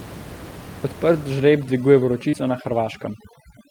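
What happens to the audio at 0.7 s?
Nothing goes wrong at 0.7 s: the speech is intact there, with only the room's own background noise sitting about 17 dB below it.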